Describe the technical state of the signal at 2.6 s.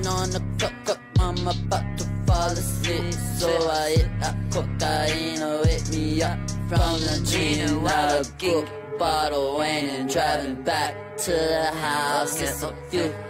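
At 2.6 s the signal is intact, with no dropout, distortion, glitch or other audible fault at that moment.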